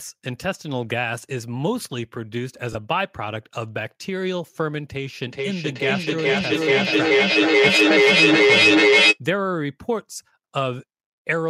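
It's a speech clip with two separate problems. First, at 2.73 to 2.75 s there's a short dropout from lost LE Audio frames: about 20 ms of audio went missing, which fits two 10 ms LC3 frames. The decoder covers the hole by reusing the last spectrum with scrambled signs, so that instant turns into a brief noisy smear rather than a clean gap. Second, from 5.27 to 9.2 s there's a feedback echo between two devices: two devices in the same room are on one call, and each microphone picks up what the other plays. Neither echo canceller can remove that, since each only handles its own playback. The speech comes back roughly every 0.4 s, and instead of fading the repeats build up, peaking about 9 dB above the speech itself.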